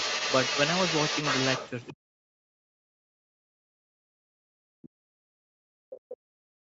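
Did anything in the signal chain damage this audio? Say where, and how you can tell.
Yes, three things went wrong, all in the call processing rather than the wiring or converters.

Overdone noise removal runs the whole way through. The background sits in near silence with little twinkling specks. That's a noise suppressor set too hard, pulling individual frequency bands down whenever they come near its noise estimate and taking quiet parts of the speech with them.

The other side's voice is leaking through from 0 to 1.7 s, sitting roughly 10 dB under the talker, and there's a tiny faint scrap again at 1.88 to 1.93 s, far down in level. That's likely the far end playing on a loudspeaker, with the echo canceller not fully removing it from the mic.

From 1.92 s to the end, the speech is suppressed in double talk. The talker keeps dipping and breaking up, with drops as deep as around 40 dB. 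Most likely the echo canceller couldn't separate near-end speech from loudspeaker echo while both were active, so it ducked everything.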